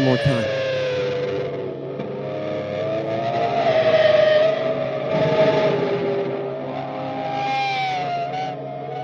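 A drift correction step runs from 3.68 to 4.42 s. Over that stretch the audio slows by about 5.6% and its pitch falls by roughly a semitone (about 99 cents), both moving together, then snaps back to normal speed and pitch at the end. The likely cause is clock-matching software that lowered the playback rate in a single jump to refill its buffer, so the sound is briefly detuned rather than gradually drifting.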